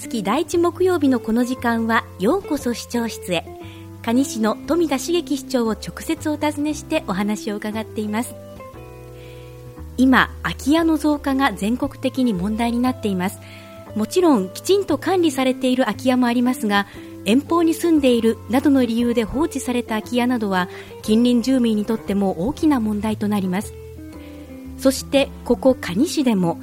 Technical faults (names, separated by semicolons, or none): none